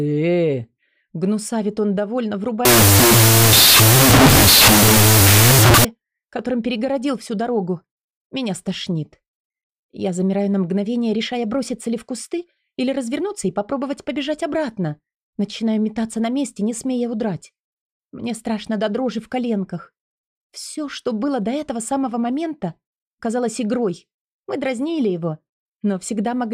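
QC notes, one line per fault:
2.65–5.85 s, wrong sample width: 16-bit integer data read as unsigned 8-bit, so each original sample becomes two byte-sized values. That gives loud noise with the original sound buried in it, playing at half speed and an octave lower.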